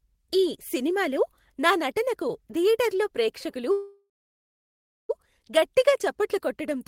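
A speech recording with a call audio freeze from 3.71 to 5.11 s: the last sound trails off as a brief fading buzz or hiss, then about 1.0 s of silence, and speech resumes where it stopped, with nothing lost. The likely cause is delayed packets emptying the jitter buffer. A waveform shows a decaying tail into a flat gap; a spectrogram shows a smeared, fading band, then a blank stretch.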